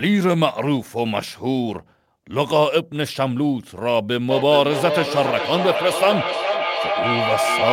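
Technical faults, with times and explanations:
throughout, sample clock jitter: the converter's clock wanders by a few microseconds, so each sample is taken slightly early or late. Where the waveform changes fastest, that timing error becomes an amplitude error, heard as a grainy hiss riding on the speech, around 35 dB below it, that swells on loud, bright syllables and disappears in pauses. A spectrogram shows a faint broadband haze that tracks the speech energy, strongest at high frequencies, with clean gaps in silence.
4.3 s to the end, feedback echo between two devices: a second device on the same call replays this side's speech into the room, and the microphone picks it up again. Each device's echo canceller removes only its own playback, so the copy returns roughly every 400 ms, thinner and more ringing, peaking at about 2 dB below the direct speech. The waveform shows delayed, near-full-height duplicates of each burst. 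A spectrogram shows the same harmonic patterns repeated at that spacing, with the low end thinned.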